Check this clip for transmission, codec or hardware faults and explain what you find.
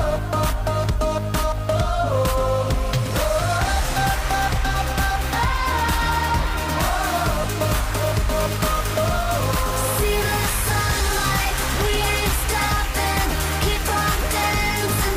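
Checking the clip turns up no faults to explain.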